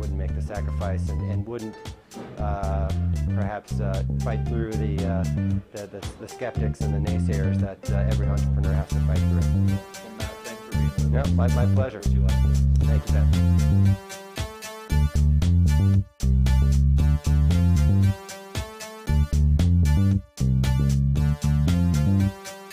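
No technical faults can be heard anywhere in this audio. Nothing in it breaks, drops out or changes unexpectedly at any point.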